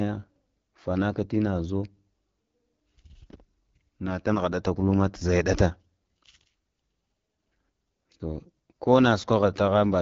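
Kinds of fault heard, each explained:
AMR wideband (HD Voice) codec: The speech has been squeezed through a low-rate wideband phone codec, and at this setting, which fits the 8.85 kbit/s mode, the damage is plainly audible as a rough, raspy grain. The vocal tract is rebuilt from a sparse pulse model below 6.4 kHz, with the top band filled by shaped noise. A spectrogram shows nothing above about 7.4 kHz throughout, with smeared, noisy texture instead of crisp harmonics near the top.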